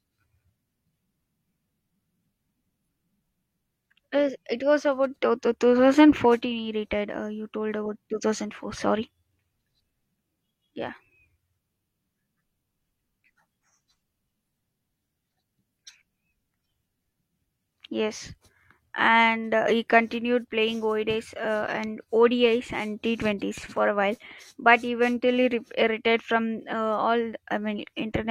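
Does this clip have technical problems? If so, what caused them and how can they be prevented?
No, the speech signal shows no technical faults, so there is nothing here that calls for a cause or a preventive fix.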